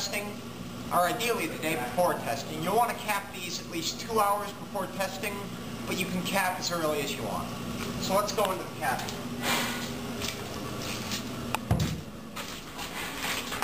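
No technical faults can be heard anywhere in the clip. Nothing in the sound points to a problem at any point.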